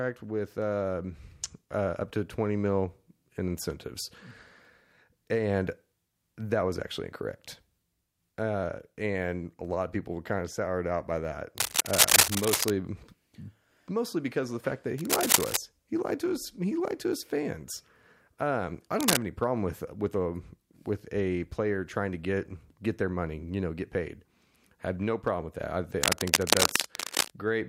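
Cable scratch noise occurs at 11.58 to 12.71 s, 14.98 to 15.57 s after "the fact that", 19.00 to 19.17 s before "any problem with with", and 26.02 to 27.36 s after "with that I think". Dense, uneven scratching bursts rise above the speech, likely from a worn cable or connector whose contact resistance fluctuated as it moved.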